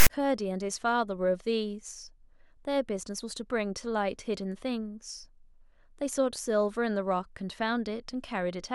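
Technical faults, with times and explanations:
0.00 to 0.07 s, file tags played as audio: the player has taken a block of text metadata at the very start of the file and decoded it as if it were sample data. Text bytes cluster in a narrow range of values rather than centring on zero, so the 66 ms burst comes out as a loud, harsh rasp pushed off to one side of the waveform, with abrupt hard edges at both ends before the speech begins.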